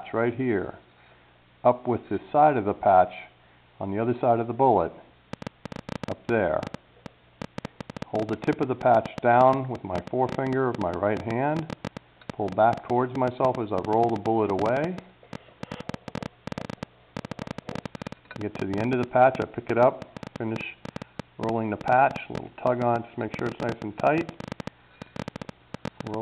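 From 5.33 s to 26.15 s, a train of clicks ticks over the sound and through pauses: roughly 200 similar pulses, about 9.6 per second at uneven spacing, standing around 10 dB above the signal. Likely interference from nearby equipment or a faulty connection or power supply. Spectrogram: thin vertical broadband lines; waveform: sharp spikes.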